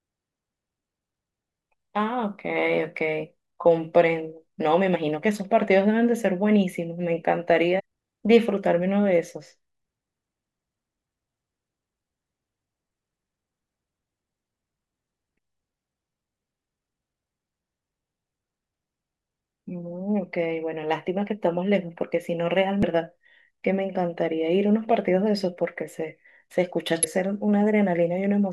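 Damaged data in a compressed stream causes brief blips in the speech at 4.95 s, 7.79 to 7.81 s, 11.20 s, 22.83 s and 27.03 to 27.05 s. At each point, corrupted frames make the decoder misread the data and lose sync, producing a short glitch.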